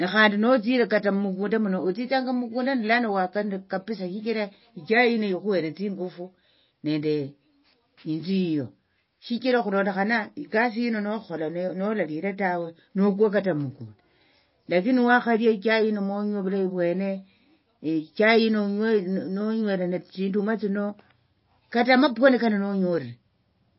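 Throughout the speech, nothing above 5.6 kHz survives, and a watery, swirling warble sets it apart from a plain low-pass filter, likely MP3 compression at a low bitrate near 24 kbps.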